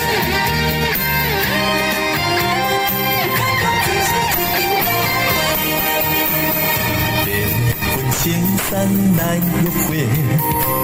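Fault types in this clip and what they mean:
call bitrate drop: At 3.44 s the call's bandwidth estimate fell and the encoder was pushed onto a far smaller bit budget, consistent with a fall from about 96 kbps to around 19 kbps. With so few bits, everything is coded more coarsely and the high frequencies are trimmed, so the sound turns rough, watery or muffled. It never recovers before 10.81 s, and the worst stretch, at the lowest rate, lasts about 4.3 s.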